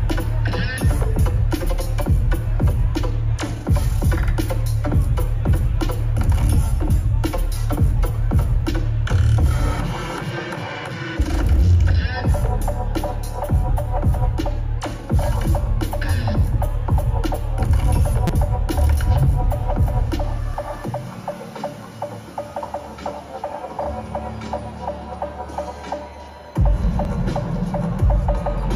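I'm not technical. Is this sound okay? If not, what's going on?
No. There is a repeated buffer at 18.27 to 18.30 s, and again at 20.54 s and 27.05 s. Fresh audio arrived late, so the player replayed its last tiny 5.8 ms slice, four extra times at first and once each later, making brief clicks or a buzz.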